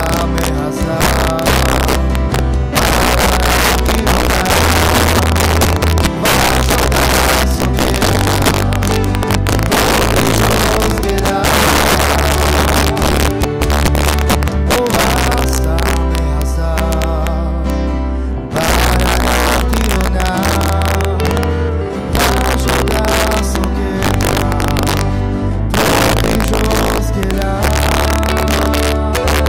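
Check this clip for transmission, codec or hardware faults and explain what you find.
There is one fault, present throughout: integer overflow. The signal is driven about 6 dB too hot. Peaks past the largest integer wrap to the opposite sign instead of being limited. About 3 percent of samples flip this way. The peaks produce violent cracks, far harsher than clipping.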